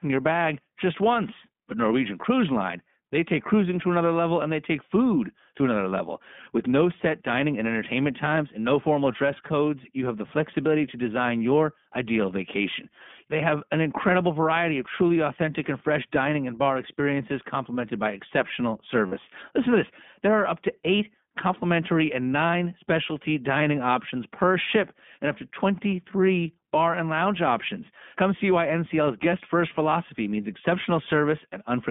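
The speech sounds narrow, a little rough and synthetic from start to finish, with nothing above 3.5 kHz and little below 150 Hz. This is the iLBC codec at work, coding each short frame independently, with plainly audible damage that fits its 15.2 kbps, 20 ms frame mode.

From 19.06 to 19.13 s, just after "experiences complemented by exceptional", the speech turns briefly into a held, slightly buzzy vowel. These are lost iLBC frames: about 60 ms of packets, roughly three frames, went missing and the decoder repeated the last pitch cycle with added noise until clean speech resumed almost immediately.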